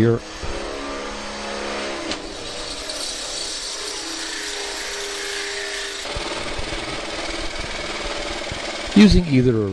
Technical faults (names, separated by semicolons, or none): damaged data in a compressed stream